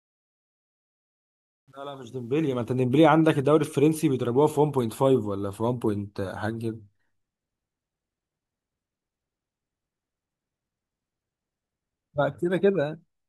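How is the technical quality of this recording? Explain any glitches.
The recording has one clear glitch, at the opening. From 0.0 to 2.84 s the fade-in carries truncation distortion on a fade: the level stage rounds to coarse steps without dither, which fits roughly 10-bit resolution. The quietest stretch, 0.0 to 2.05 s, turns gritty. A noise gate would chatter at a fixed threshold. Here the grit tracks the rising fade and clears as the level grows smoothly toward 2.84 s.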